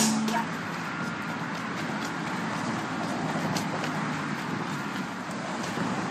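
No technical faults are audible.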